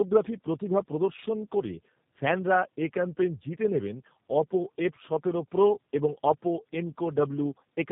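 Throughout, the speech sounds rough, muffled and warbly, with nothing above 3.8 kHz. This is tandem speech coding, consistent with two G.729A passes at 8 kbit/s compounding their damage.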